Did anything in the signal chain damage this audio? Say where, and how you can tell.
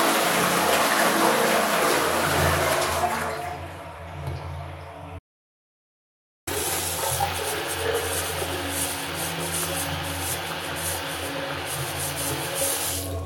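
Yes. There is an audio dropout to silence from 5.19 to 6.47 s, about 1.28 s long. The sound stops abruptly and resumes mid-flow. The gap is silent, with no room tone. That points to the input stage, likely a lost device or link while recording continued.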